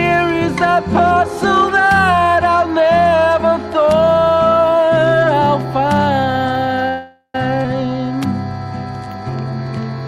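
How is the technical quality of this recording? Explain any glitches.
The recording has four kinds of fault: constant mild overload plus a cluster of network glitches between about 6.9 and 9.2 s.

Hard clipping runs throughout. The signal overdrives by about 3 dB, so a small fraction of samples have peaks cut flat, adding crackle on the loudest moments.

A call audio freeze spans 6.88 to 7.35 s. Packets were likely delayed until the jitter buffer ran dry. The receiver fills 458 ms by extending the last sound, ending in about 70 ms of silence. Playback then resumes without losing anything.

A skip ahead at 7.63 to 7.65 s drops roughly a fifth of a second of audio. The two sides join almost seamlessly.

Jitter buffer slow-downs at 7.87 to 8.18 s and 9.05 to 9.24 s repeat pitch periods to rebuild reserve. They add 47 ms and 39 ms, running at 87% and 84% speed, so the sound drags without changing pitch.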